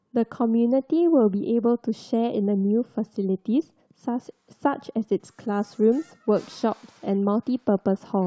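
No technical faults can be heard anywhere in the speech recording, and the signal stays continuous and steady throughout.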